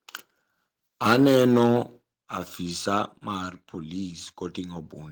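This speech clip contains one fault, a microphone volume stepped down at 2.13 s. The call software likely judged the input too hot and cut the device's input volume in a single step. In the sound, the level of the speech and the background noise beneath it falls together and instantly, by about 7 dB, with no fade. The drop then holds for the rest of the clip, so the second half sits noticeably quieter than the first.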